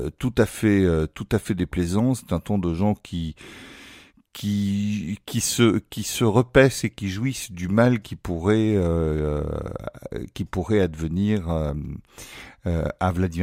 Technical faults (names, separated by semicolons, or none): none